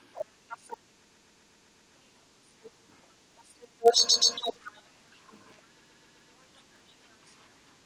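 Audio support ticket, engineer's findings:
Filter restarted on every block: steady 50 Hz buzz throughout the speech, rising and falling with level. Filter state reset at each block boundary, so each block starts from zero and leaves a small transient. The 50 Hz rate fits roughly 20 ms processing blocks.

Repeated frames: stutter at 1.03–1.93 s, 4.08–4.34 s and 5.79–6.30 s. The same 128 ms segment replays 7, 2 and 4 extra times, adding about 0.9 s, 0.26 s and 0.51 s. Likely duplicated writes or retransmission upstream of the decoder.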